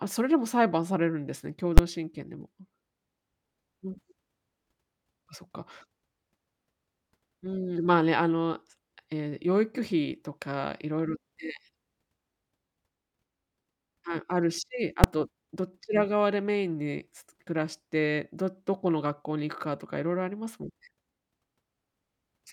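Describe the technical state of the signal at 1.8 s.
Right at 1.78 s there's a single loud bang: invalid numbers at full scale. A bad calculation pinned a roughly 12 ms block, which fits a 512-sample block, at maximum value.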